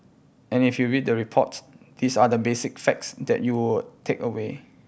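Nothing in the speech stood out as a technical problem on listening.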